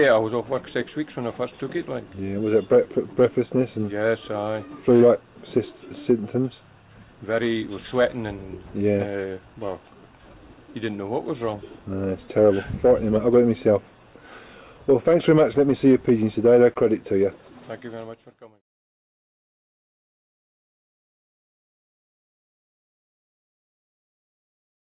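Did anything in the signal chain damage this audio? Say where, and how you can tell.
No, no stage of the signal chain has left damage that can be heard, from the wiring and conversion through to storage and playback.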